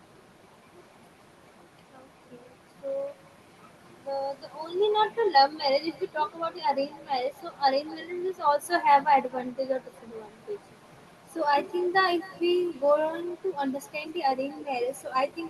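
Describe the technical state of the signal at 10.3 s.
At 10.3 s the speech carries an echo with no canceller, and this runs through the whole clip. The far end plays the call through a loudspeaker. Its microphone picks that up and sends it straight back. Each phrase returns roughly a third of a second later. The copy sits about 22 dB below the direct speech. It sounds thinner, a faint trailing shadow. The call codec's limited top end, near 12 kHz, shapes that returning copy too.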